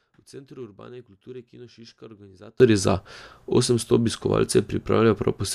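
At 2.60 s the speech and its background noise leap up together by about 24 dB and stay there to the end. This is a sudden gain jump, likely a digital gain change applied in a single sample with no ramp.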